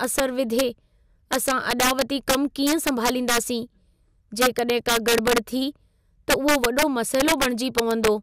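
Integer overflow runs through the whole speech clip: with the signal pushed about 5 dB too hot, roughly one percent of samples exceed the integer limit and wrap to the opposite sign. Unlike clipping's flattened, buzzy peaks, each loud moment snaps into a violent, sharp crack.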